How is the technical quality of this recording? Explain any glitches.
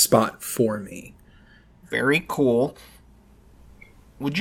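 The speech signal is technically intact, with no glitches or transmission faults to report.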